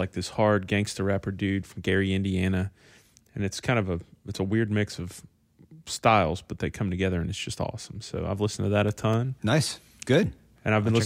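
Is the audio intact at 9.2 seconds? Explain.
No. Periodic USB or driver dropouts run from 8.64 to 10.89 s: every 0.25 s, about half a millisecond of speech is replaced by silence, heard as regular ticks.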